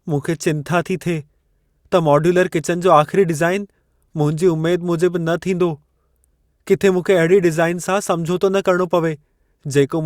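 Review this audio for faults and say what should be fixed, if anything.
No faults detected; nothing needs fixing.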